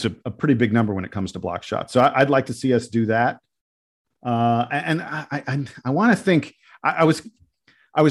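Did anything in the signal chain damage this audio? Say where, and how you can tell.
No, nothing in the signal chain has damaged this speech recording. At no point does any stage, from the wiring through to playback, leave a mark that can be heard.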